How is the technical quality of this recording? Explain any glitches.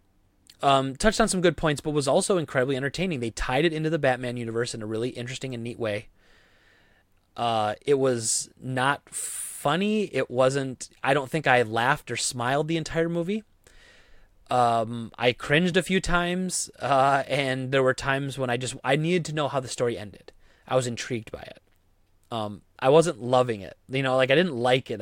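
The recording has two brief dropouts, both blocks of digital silence. At 15.72 s, just before "a few times uh", a gap of about 1.5 ms sounds like a tick or dip. At 20.68 s, between "how the story ended" and "I was intrigued by", a 5.3 ms gap is heard as a tick or dip. In each case the output buffer was likely not filled in time, so a run of samples became zeros. The waveform drops to silence and back with no fade. The second gap's length fits a 256-sample buffer.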